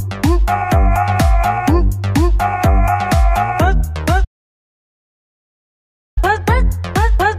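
An audio dropout to silence runs from 4.25 s to 6.17 s. The sound cuts off abruptly into silence, with no room tone, for about 1.9 s, then resumes mid-flow. The input signal was likely lost while recording continued writing silence, so that stretch is gone.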